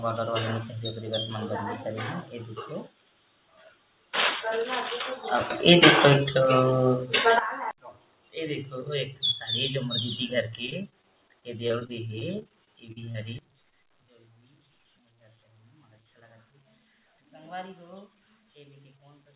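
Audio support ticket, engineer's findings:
Sudden gain jump, 5.50 s: level steps up about 12 dB with no ramp, sound and noise floor rising together, then drops back at 7.39 s. Likely a digital gain setting or bit shift applied sample-to-sample.

Sudden gain jump, 13.39 s to end: abrupt cut of about 22 dB, noise floor falling with it. Same instant-step mechanism, likely gain applied without smoothing.

Repeated packet loss (robotic sound), 10.66–13.16 s: choppy stretch. 21 gaps in 2.5 s, longest 41 ms, about 280 ms of audio missing. The jitter buffer and decoder keep extending the last sound to bridge each hole, so around 16% of the stretch is synthetic fill. Pieces drop out. The band-limit at 4 kHz fits the G.711 A-law path at 64 kbps.

Short concealed packet loss, 13.70–13.74 s: brief smear just after the second gain drop. About 20 ms of audio arrived late or never. The decoder patched the hole with 17 ms extrapolated from the preceding sound, then crossfaded back into real audio. 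The result is a small wobble rather than a clean gap.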